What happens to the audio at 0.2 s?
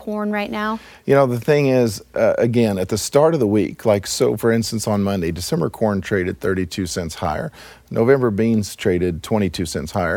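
Nothing goes wrong at 0.2 s: the speech there plays through intact, with no dropout, click, distortion or other fault.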